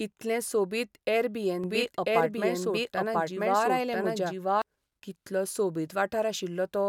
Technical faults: doubled audio track

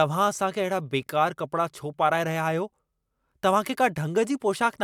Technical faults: none

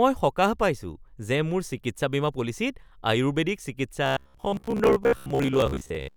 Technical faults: robotic sound from repeated short buffers

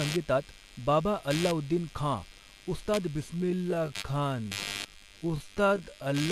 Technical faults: computer activity noise; time-stretched section

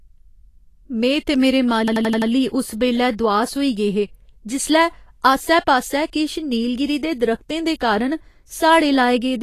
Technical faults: Vorbis compression; system hang loop

